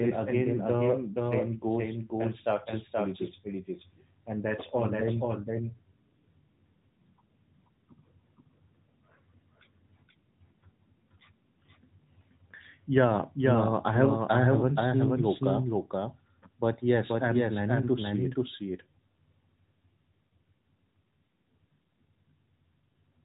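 Throughout the clip, a doubled audio track: a clean second copy, about 5 dB quieter and about half a second late, likely from a slower duplicate capture path, trailing each phrase without room decay.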